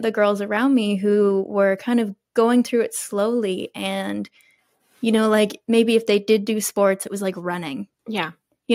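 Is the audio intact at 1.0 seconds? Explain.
Yes, at 1.0 seconds the speech is intact, with no dropout, click, distortion or other technical fault at that moment.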